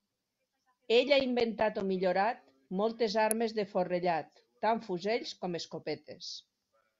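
At 3.31 s, between "inventat o millorat moltes" and "de forrellat tant fusells", a single sharp snap peaking around -10 dBFS sits on top of the speech, likely an electrical switching spike from a nearby arc. The speech continues unbroken beneath it, unlike a dropout click.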